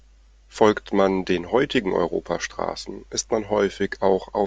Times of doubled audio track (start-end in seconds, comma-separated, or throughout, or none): none